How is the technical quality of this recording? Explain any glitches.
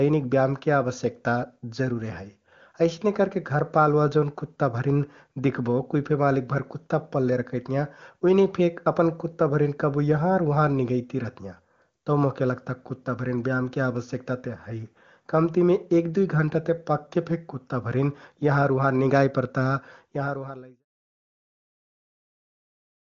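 Nothing here counts as a glitch; the recording holds up fine, and the level just eases down gently near the end the way an editor would finish it.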